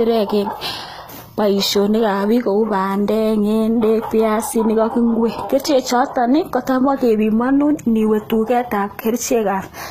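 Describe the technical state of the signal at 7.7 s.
At 7.7 s, as throughout the clip, the speech likely went through HE-AAC compression at a low rate fitting about 20 kbps. The upper band is copied up from lower ones rather than coded, so s sounds turn plainly gritty and lispy, with nothing above 14.9 kHz.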